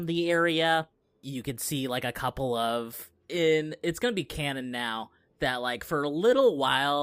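No technical faults can be heard in this recording.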